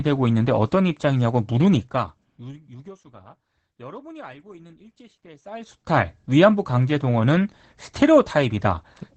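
From the start the speech carries Opus voice compression: nothing above 8.4 kHz, a muffled, hoarse edge that sounds like low-bitrate SILK coding, around 12 kbps. Then from 5.41 to 5.99 s, zipper noise: a level change of roughly 25 dB applied in unsmoothed steps, around a hundred a second, giving a fast ticking buzz.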